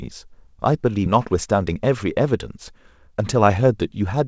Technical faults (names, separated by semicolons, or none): skip ahead; jitter buffer speed-up